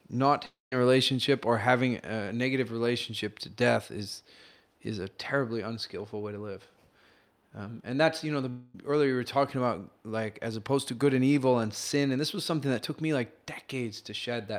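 Long network dropouts occur at 0.45 to 0.73 s and 8.50 to 8.75 s in this speech, likely from audio that never arrived. In the first, about 270 ms is missing: the receiver stretches the last sound into a fading buzz, then 180 ms of near silence follows before the speech resumes past the gap. The second loses about 240 ms, and the concealment fill covers the whole gap, so it sounds like a smeared hum with no silent stretch.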